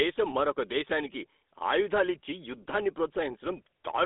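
From start to finish the speech carries GSM full-rate codec damage, plainly audible as a buzzy, gravelly roughness. The codec rebuilds the voice from a vocal-tract model excited by a sparse, regularly spaced pulse train, which fits the 13 kbps full-rate scheme. The band sits roughly between 250 Hz and 3.6 kHz. A spectrogram shows a hard ceiling with nothing above 3.8 kHz and coarse, smeared harmonic striations below it.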